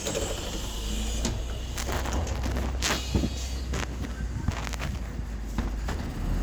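No technical faults are audible.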